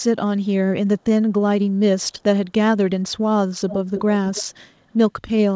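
At 3.69, 3.95 and 4.34 s, brief scraps of echo leak appear: a faint copy of the speech returning 319 ms late, likely from a loudspeaker echo the far-end canceller missed. Unlike room reverb, it is a distinct delayed repeat, loudest at 3.95 s.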